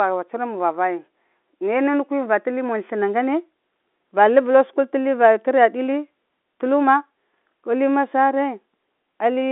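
There are no technical faults to describe in this speech clip, which comes through as ordinary telephone-band audio.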